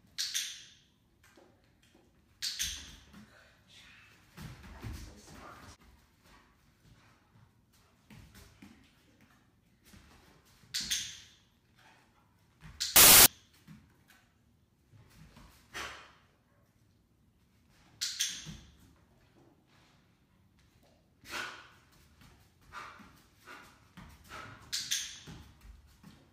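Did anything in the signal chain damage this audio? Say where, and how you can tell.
Yes, there's a sample-format conversion problem, a case of samples built from the wrong bytes, from 12.96 to 13.26 s. For about 0.3 s the sound is swamped by loud, harsh broadband noise. That's the signature of the reader assembling each sample's bytes wrongly, whether shifted by a byte, swapped, or misaligned, so the jittery low-order bits land in the high-order position.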